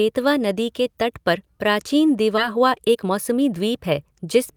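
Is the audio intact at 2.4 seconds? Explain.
No. A skip ahead at 2.37 to 2.39 s drops roughly 0.7 s of speech. Playback jumps straight forward with no gap, so the two sides join abruptly. A jitter buffer speed-up follows from 2.49 to 4.52 s, trimming short pitch-period pieces to shed around 0.2 s of buffered delay. The speech runs at 111% speed at unchanged pitch and sounds hurried.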